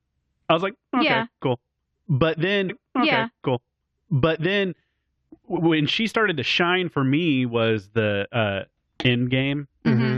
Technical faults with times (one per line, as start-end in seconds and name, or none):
2.68-4.70 stream segment repeated